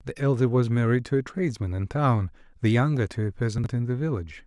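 At 3.58 to 3.66 s the speech has chunks out of order: a 20 ms chunk arrived late and plays three chunks after its proper place. No audio is missing, but the reordering creates three hard joins, heard as a brief jumbled stutter.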